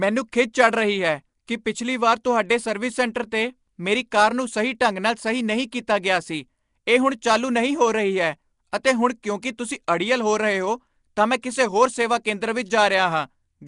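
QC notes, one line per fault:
Throughout, Nellymoser compression: the speech carries a rough, hissy halo and a smeared, underwater quality, with nothing above about 10.6 kHz, likely from the old Flash microphone codec. Weak bands are replaced by noise rather than dropped to silence, which separates it from plain low-bitrate muffling.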